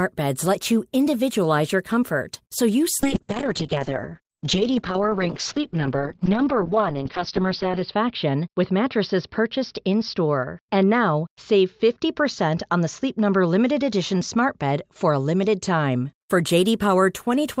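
At 3.06 s, just after "your comfort so you", a call bitrate drop begins. The encoder is given far fewer bits. The sound fits a fall from 32 kbps to around 7 kbps. The speech turns coarse and watery. Bandwidth narrows from 20 kHz to 6 kHz, so the top end vanishes and the speech sounds muffled. The worst stretch lasts about 4.8 s. Quality recovers by 16.21 s.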